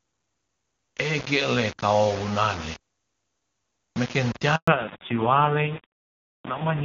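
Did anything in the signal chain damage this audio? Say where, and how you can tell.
Yes. Sample-format conversion: grainy distortion that tracks the signal throughout, about 15 dB below it, likely from rounding to roughly 5 bits without dither.

Network: a handover gap from 4.56 to 4.68 s. The sound dies abruptly into 120 ms of silence while the call switched links.

Codec: fallback to narrowband from 4.68 s to the end. Nothing remains above 4 kHz, so the sound turns dull and rough, which fits a low-rate narrowband codec replacing HD Voice.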